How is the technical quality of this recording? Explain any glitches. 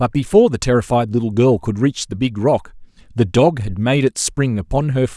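Nothing in the recording stood out as a technical problem on listening.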